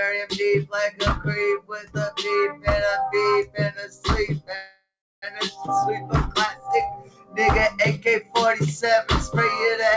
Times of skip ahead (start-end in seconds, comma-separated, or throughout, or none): 5.66-5.69